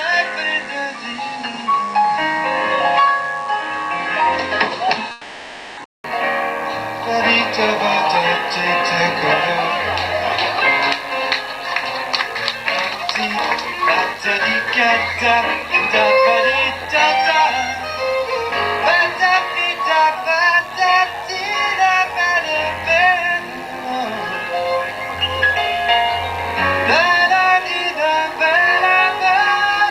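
A steady, raspy buzz sits about 25 dB under the sound for the whole clip: mains buzz, spiky 50 Hz interference with harmonics reaching well up the spectrum.

From the start to 6.04 s the audio is dull and narrow, with nothing above 9.6 kHz and its own hiss some 30 dB down. It likely came from an input switched to a poorer device, and clears after a 200 ms gap.

From 5.11 to 5.79 s the sound smears into a fading buzzy continuation for 0.66 s, likely a long network dropout that the receiver concealed.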